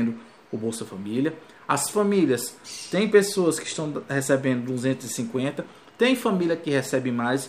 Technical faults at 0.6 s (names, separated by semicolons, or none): none